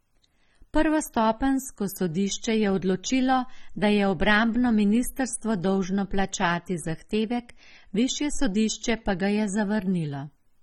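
From start to finish the speech is dull and smeared, with a warbling, fizzy texture on sustained sounds and sibilants, and nothing above 17.9 kHz. This is likely AAC compression, with damage that fits an AAC-LC stream at around 24 kbps.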